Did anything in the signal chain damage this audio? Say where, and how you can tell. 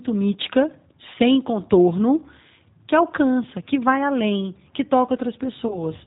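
Yes. The damage happens at the codec stage. The whole speech clip has been through the G.729 codec, running at 8 kbit/s. It sounds slightly rough and synthetic because the decoder rebuilds each 10 ms frame from a vocal tract filter, a pitch predictor and a few pulses, rather than from the original waveform. On a spectrogram, energy stops at a hard ceiling near 4 kHz, with nothing above it across the entire clip.

The second fault sits at the network stage: VoIP packet loss concealed by the speech codec, from 5.68 to 5.79 s. About 20 ms of audio went missing, which fits two lost 10 ms frames. The decoder filled the gap by repeating its last pitch and filter at falling gain, so the sound smears into a brief buzzy tone or coloured noise that fades. Because each frame builds on the one before, the distortion continues past the gap. The waveform shows a short, decaying stretch.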